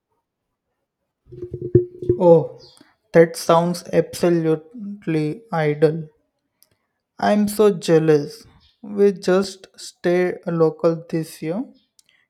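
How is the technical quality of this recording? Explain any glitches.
The speech is marred by two brief dropouts. At 7.53 s and 9.44 s there are sharp ticks, each a block of digital silence lasting about 0.73 ms and 2.9 ms, which fits blocks of 32 and 128 samples. The audio drops abruptly to silence and back without any fade. This most likely happens when the output buffer isn't filled in time.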